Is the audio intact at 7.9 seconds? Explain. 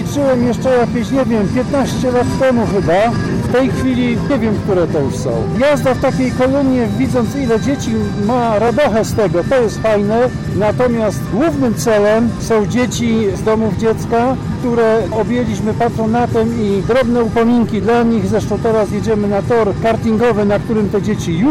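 No. At 7.88 s the sound jumps forward with no gap of silence, as though a short slice, around 30 ms, had been cut out and the two edges butted together. That points to a dropped buffer (overrun): the likely cause is that the recording software fell behind and the hardware overwrote a block of samples before they were collected, so that piece was lost and the surrounding audio was joined directly.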